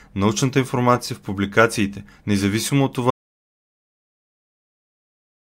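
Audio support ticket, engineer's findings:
Audio dropout to silence, 3.11 s through end of file. Speech cuts off abruptly after "в публикациите независимо от" and never returns. Gap is silent, no room tone, no decay. Likely cause: input lost upstream (device disconnect, failed link or mute) while recorder kept writing silence. Content after cut unrecoverable from this file.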